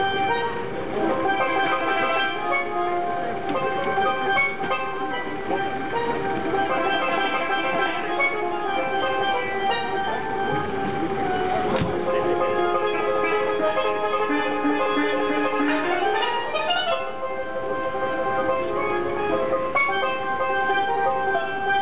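No technical fault can be heard anywhere in the recording.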